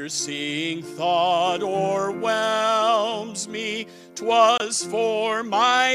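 Right near the end, at 4.58 s, the sound just drops out for about 32 ms, until 4.61 s. That's a corrupt frame muted. Some bits in the compressed stream got flipped, the decoder rejected that chunk, and the player filled the gap with silence instead of guessing. The hole starts abruptly, and its length points to a single lost frame. Timing stays intact, so everything after it lines up where it should.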